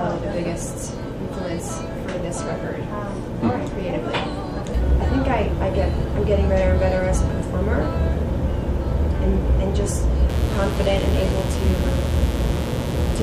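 A mains buzz enters at 10.29 s and runs to the end of the clip, sitting roughly 15 dB below the audio. Its fundamental is 60 Hz, pointing to a 60 Hz supply, with sharp switching spikes from a dimmer, rectifier or unshielded cable arriving twice per cycle. That spiky waveform is what separates it from plain hum: instead of a smooth, low tone, it has a raspy edge, with harmonics stacked up into the kilohertz range.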